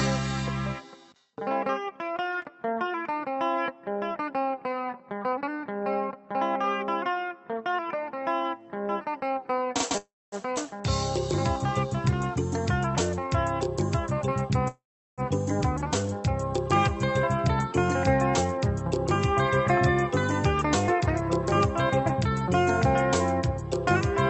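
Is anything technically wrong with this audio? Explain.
Yes. The audio has two call audio freezes, a skip ahead, and two stretches where the jitter buffer changes playback speed. All of it passes through a call codec whose top end stops near 8 kHz.

The call audio freezes are at 9.97–10.35 s and 14.68–15.21 s. Both times the audio hangs: the last sound carries on as a fading buzz or hiss and then drops to silence, for about 0.24 s in the first freeze and about 0.38 s in the second. The likely cause is packets stalling in transit until the jitter buffer ran dry. When the audio resumes it picks up exactly where it stopped. That sets a freeze apart from a dropout, because a pause of roughly 0.35 s and 0.5 s is inserted while nothing is lost.

The skip ahead comes at 10.56–10.60 s, right after the first freeze. It is the opposite fault. Roughly a fifth of a second of audio vanishes, and the two sides are joined with only a tiny patch of filler, so the sound lurches forward instead of pausing. 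That fits the jitter buffer discarding a backlog to claw back part of the delay the freeze had built up. A freeze adds time, and a skip ahead removes it.

The jitter buffer slow-down runs from 11.87 to 13.69 s. Here the receiver repeated single pitch periods and slivers of pauses to rebuild its reserve, stretching the passage by 47 ms. The result plays at 98% speed with the pitch unchanged, so sounds are faintly drawn out. A slowed recording would sag in pitch, and this one keeps the same pitch.

The jitter buffer speed-up runs from 17.47 to 23.64 s. The receiver trimmed short pitch-period pieces again and again to cut excess delay, removing about a tenth of a second in total. Playback runs at 102% with the pitch held steady. Unlike the skip ahead, no single jump is audible, because the shortening is spread thinly across six seconds.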